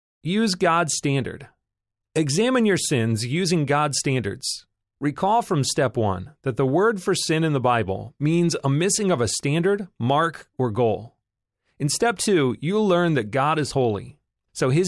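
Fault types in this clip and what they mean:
No fault types can be heard in this clip.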